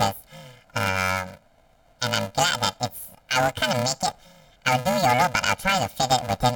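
From start to finish, the speech has planar audio read as interleaved. Each short block stores all its left samples and then all its right, but playback takes them as alternating pairs, so every block plays twice at double speed, left half then right. The blocks here are tiny, about 2.67 ms, which fits 128 samples at 48 kHz. That turns the fault into a robotic buzz at roughly 375 Hz riding over everything, rather than a clear octave jump.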